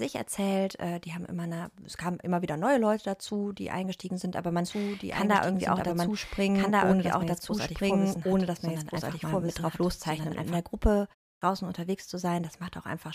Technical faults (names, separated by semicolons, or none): doubled audio track; clipped start after a pause